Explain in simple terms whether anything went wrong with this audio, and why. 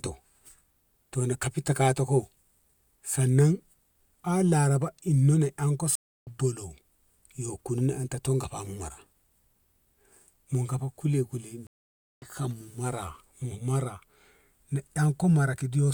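A stream reconnect happened twice: the connection dropped and the player restarted mid-stream. At 5.95 s the speech goes silent for about 0.3 s and resumes roughly 0.4 s further on. At 11.67 s it goes silent for about 0.55 s and jumps ahead about 0.7 s.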